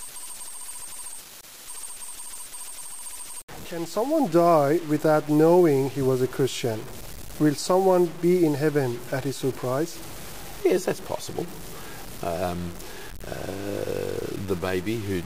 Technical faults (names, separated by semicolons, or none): low bit depth without dither